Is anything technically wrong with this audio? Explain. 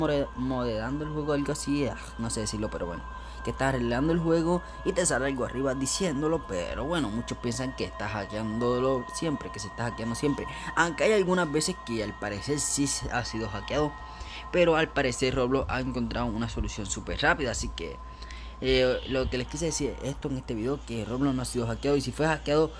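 No, nothing technically wrong can be heard here.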